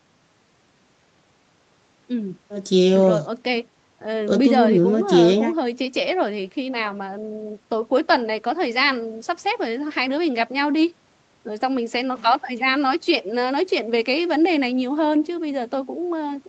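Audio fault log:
No faults heard.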